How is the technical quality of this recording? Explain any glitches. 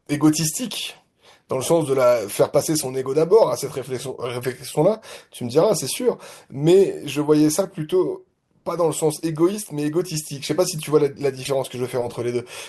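The speech has three short glitches, all from corrupt frames decoded. Damaged compressed data was played instead of discarded, so misread gains and codes put energy at wrong frequencies for a frame or a few frames.

At 1.96 s, a brief blip spans a few frames, peaking around -25 dBFS.

From 4.42 to 4.44 s, a single frame gives a similar chirp at roughly the same level.

From 11.43 to 11.50 s, the loudest burst, near -15 dBFS, spans several frames and sounds like a noisy squeak.

What sets these apart from dropouts is that they add foreign sound rather than just leaving a gap or a smeared repeat.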